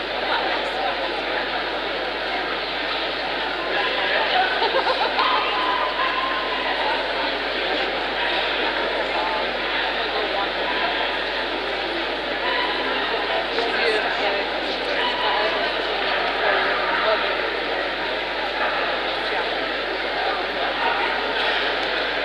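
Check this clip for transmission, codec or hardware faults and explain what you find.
There is one fault: mains hum, present from start to finish. A ground loop or nearby transformer is leaking the 50 Hz power supply into the signal path. It sounds like a steady low drone with some low harmonics, sitting roughly 25 dB below the audio.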